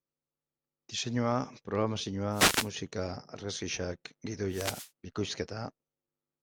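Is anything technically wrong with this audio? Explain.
Yes. Two wireless microphone noise hits break into the speech, from 2.31 to 2.70 s and from 4.49 to 4.91 s, each about 0.4 s long. The FM radio link fades as reflected paths cancel the direct signal, so receiver noise rises and partly covers the voice, heard as a brief swish of static. On a spectrogram each appears as a broadband noise patch spanning the full height; the waveform shows a hiss-filled stretch over the speech envelope.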